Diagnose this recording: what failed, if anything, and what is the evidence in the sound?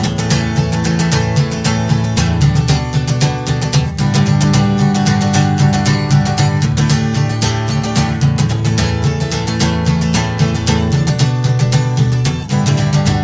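Wrong sample rate, throughout the clip. The failure sits at the playback stage. Everything runs slow, at about 0.73 times normal speed, and the pitch sits about 5.6 semitones low, with tempo and pitch dropping together by one fixed ratio. That pairing shows the samples were clocked out slower than they were captured, with no rate conversion. The ratio fits audio recorded at 22 kHz being played back at 16 kHz.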